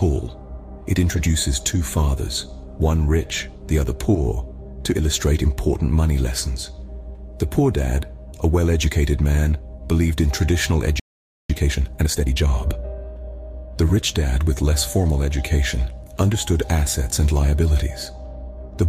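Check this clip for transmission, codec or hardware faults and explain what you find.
Two linked playback faults appear, a stall followed by a catch-up.

Playback stall, 11.0 to 11.5 s: the player was likely starved of data or its output thread was blocked, so nothing reached the output for about half a second. The sound cuts out abruptly mid-flow, then resumes.

Time-compressed catch-up, 11.5 to 12.48 s: to shed the backlog built up during the stall, the player trimmed small segments and cross-faded the joins, running at 1.5 times normal speed. The sound is rushed but keeps its pitch.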